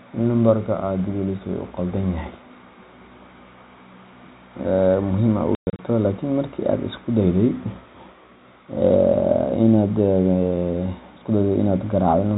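Between 5.55 and 5.79 s the speech drops out in hard-edged gaps of silence, about 180 ms missing in total with the longest hole 120 ms. That's packet loss filled with silence, with gap sizes that fit 30 ms packets, over a G.711 phone-band line.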